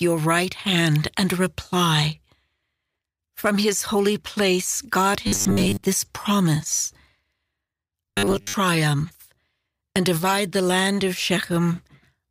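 At 5.27 to 5.87 s and again at 8.09 to 8.54 s the speech goes robotic, a stiff metallic buzz locked at 100 Hz. That's likely a 10 ms buffer being replayed when audio arrives too late: about half the sound gets repeated in the first stretch, most of it in the second.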